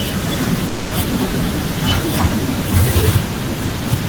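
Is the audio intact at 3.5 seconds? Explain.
Yes, the speech at 3.5 seconds plays through intact, with no dropout, click, distortion or other fault at that moment.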